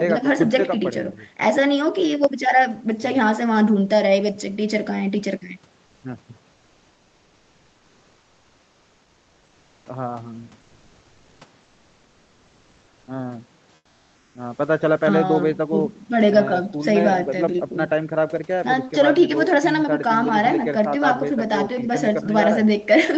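From 2.24 s to 22.26 s, clock drift buffer slips give a regular click about every 5 s while the speech runs. The cause is likely two devices on mismatched clocks, off by a few tens of parts per million. Each slip drops or repeats only a handful of samples. The fixed spacing distinguishes these clicks from random packet-loss glitches.

Comfort noise in place of the background covers the pauses at 6.51–9.85 s, 10.61–11.41 s, 11.63–13.07 s and 13.75–14.35 s. The real room tone gives way to a smooth, featureless hiss, up to about 4 dB quieter, likely from Opus discontinuous transmission. Unlike a noise gate, it fills the pause with hiss rather than silence.

At 13.05 s, an onset clipped by the voice detector makes the speech start abruptly, with 20 ms of its soft beginning lost to comfort noise, likely because the detector reacted late. Over the whole clip, the speech stops at 8 kHz, as expected on this call path.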